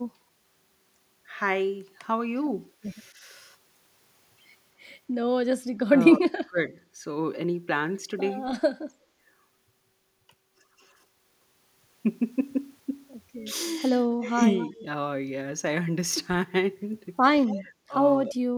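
Speech suppressed in double talk hits this speech recording at 6.14 to 6.58 s, 14.30 to 14.39 s, 14.74 to 14.84 s, 17.50 to 17.72 s, 17.88 to 17.94 s and 18.24 to 18.54 s. The voice sinks abruptly, by around 30 dB in the first dip and around 35 dB in the last, with shallower dips of roughly 5 to 15 dB between. The likely cause is an echo canceller that, with both sides talking, could not tell the local voice from loudspeaker echo and attenuated everything. Echo leak appears at 14.58 to 14.83 s and 17.47 to 17.56 s as a faint delayed copy of the voice, about 255 ms behind the original and roughly 15 to 20 dB below it. This is likely a speakerphone's canceller failing to remove all of what its microphone picked up, sending the remainder back down the line.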